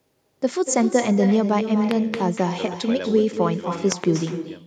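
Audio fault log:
Throughout: echo with no canceller. A quieter, thinner copy of the speech trails it by roughly a fifth of a second at about -9 dB, returned from a far-end loudspeaker.
1.91–2.16 s: loud pop. Two sharp pops, roughly 15 dB above the speech, sit over the continuing audio, likely from a voltage spike such as a plug or switch.
3.92–4.06 s: loud pop. Another double pop, roughly 15 dB above the speech, is heard while the sound carries on underneath.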